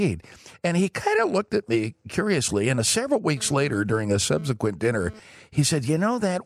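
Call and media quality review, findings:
GSM phone buzz, 3.37–5.19 s: raspy 217 Hz buzz with dense harmonic comb on spectrogram, about 21 dB below speech. Nearby handset's data bursts rectified in audio circuitry.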